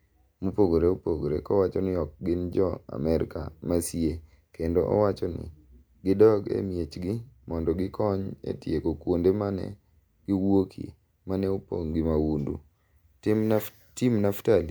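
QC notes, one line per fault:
No faults found anywhere in the speech recording.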